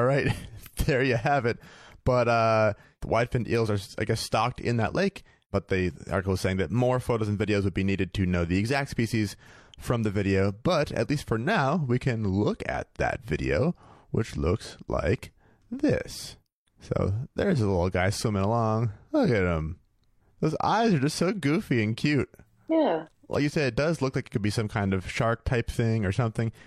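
Nothing goes wrong anywhere in this speech recording, so there's nothing to point to along the way.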